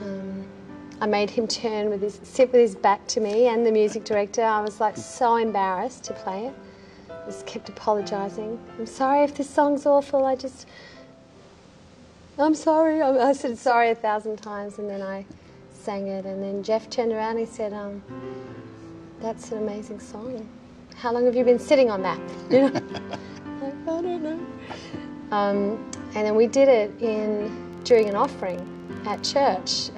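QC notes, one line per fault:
10.97–13.84 s, digital radio blending to analogue: the receiver lost digital and cross-faded over 461 ms to FM, so level drops about 2 dB and faint hiss appears roughly 35 dB down.
27.73–29.38 s, filter restarted on every block: the filter resets its state each block, putting a transient at every boundary, heard as a 23.4 Hz buzz tracking level, which fits 2048-sample blocks.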